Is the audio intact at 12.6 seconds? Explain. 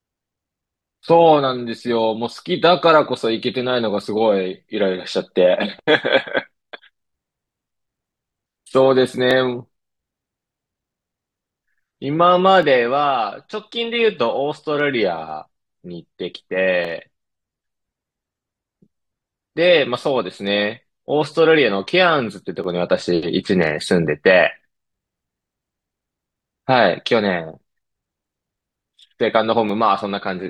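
No. From 11.86 to 23.86 s the adaptive stream switched to a lower-bitrate version, consistent with a fall from 96 to 48 kbit/s AAC, so codec artefacts rise, with no gap. At 12.63 s a single sharp click is heard, likely from dropped samples, where under a millisecond of the waveform went missing and it jumped abruptly.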